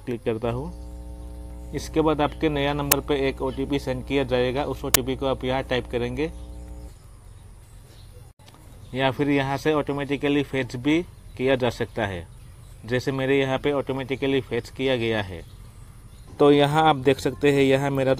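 From about 0.41 s to 6.91 s there's a mains hum sitting under the audio, a steady low drone at 60 Hz with a few low harmonics riding on it. It sits at roughly 15 dB below the signal, so it's plainly audible rather than buried. That's power-line energy leaking into the signal path, most plausibly through a ground loop or a transformer sitting close to the cabling, and it stops cleanly at 6.91 s.

While that hum is still going, two sharp cracks hit at 2.92 s and 4.94 s. These are uninitialised buffer faults. Each one is a block of about 10 ms that got sent to the output before any real audio had been written into it, so whatever junk was left in memory played as samples. Ten milliseconds of garbage fits a block of a few hundred samples, and it comes out as a loud, abrupt crack.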